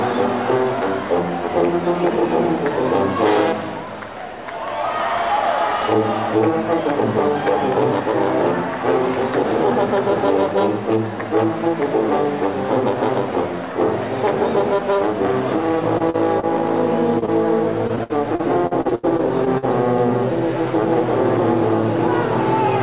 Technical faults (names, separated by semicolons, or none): short concealed packet loss; repeated packet loss (robotic sound)